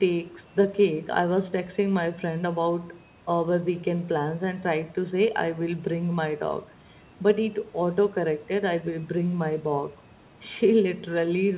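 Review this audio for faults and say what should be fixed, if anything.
No faults; nothing needs fixing.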